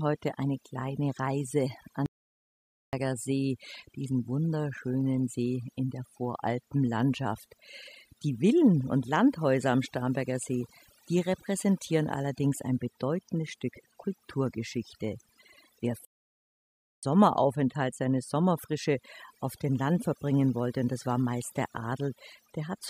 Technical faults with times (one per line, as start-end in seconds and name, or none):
0.00-22.89 overdone noise removal
2.06-2.93 playback stall
16.05-17.03 playback stall